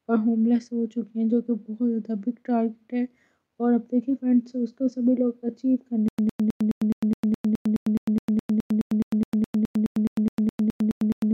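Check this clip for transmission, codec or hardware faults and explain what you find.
A stutter with silent gaps runs from 6.08 s to the end. The same 108 ms fragment repeats about 25 times, each followed by about 102 ms of digital silence, at a steady 210 ms period. This is likely a stalled player or stream replaying its last buffer on each retry. The waveform shows identical blocks separated by flat silent stretches, and the spectrogram shows evenly spaced vertical bands of the same content.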